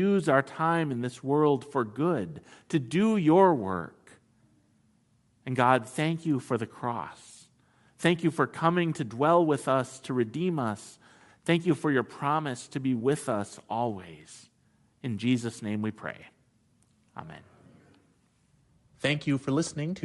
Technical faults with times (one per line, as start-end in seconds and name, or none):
0.00-20.05 Bluetooth LC3 compression